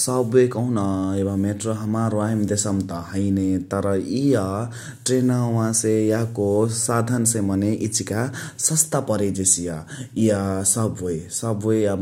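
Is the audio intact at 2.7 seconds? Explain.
Yes, the audio is intact at 2.7 seconds, with no dropout, distortion or other audible fault at that point in the speech.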